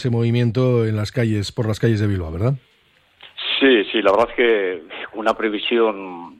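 No technical faults are audible.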